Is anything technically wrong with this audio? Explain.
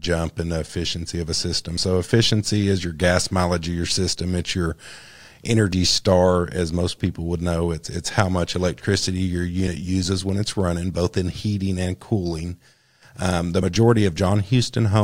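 Yes. There are three instances of audio missing between chunks, at 1.78, 5.73 and 13.63 s. The first falls between "efficiency of a system" and "efficiency is your gas". The second comes just before "star as most people", and the third just after "um the". Each drops roughly 50 ms. The cause is likely a recorder working in 4-second chunks that loses a sliver at each handover. The two sides butt together, so the speech jumps forward abruptly.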